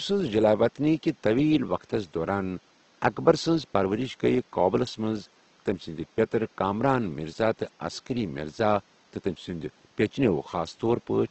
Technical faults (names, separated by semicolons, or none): Opus compression